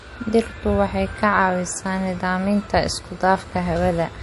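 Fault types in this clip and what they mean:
MP3 compression: The speech is likely coming through a heavily squeezed MP3. Nothing survives above about 11.3 kHz, and the plainly audible watery, swirly texture comes from quiet frequency detail flickering in and out, which fits a low bitrate around 48 kbps.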